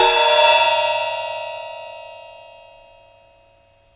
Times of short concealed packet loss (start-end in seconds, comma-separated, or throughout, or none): none